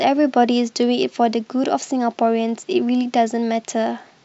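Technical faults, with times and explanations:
Nothing in this speech recording stood out as a technical problem on listening.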